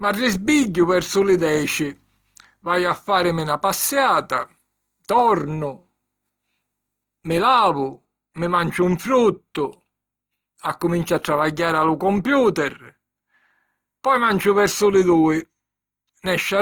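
Throughout, the speech sounds grainy and rough, likely Opus compression near 24 kbps filling starved bands with noise. A spectrogram shows speckled, hazy high bands ending at 20.2 kHz.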